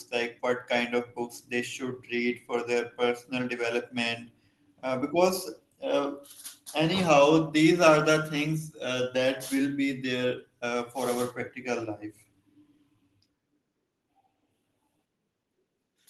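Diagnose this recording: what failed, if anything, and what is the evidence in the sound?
Nothing failed here: the speech runs along steadily, with no dropouts, glitches or distortion to point at anywhere in the signal chain.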